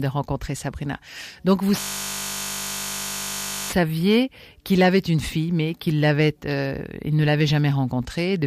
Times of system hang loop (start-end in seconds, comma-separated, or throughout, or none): 1.80-3.70